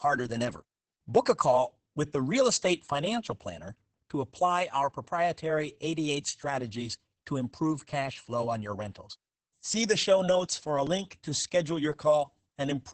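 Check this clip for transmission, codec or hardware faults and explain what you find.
One codec fault runs through the whole clip. Opus voice compression, from start to finish: the SILK linear-prediction coder keeps only a wideband signal cut off near 8 kHz and codes the excitation very coarsely, consistent with roughly 10 kbps. The speech sounds muffled, hoarse and slightly robotic.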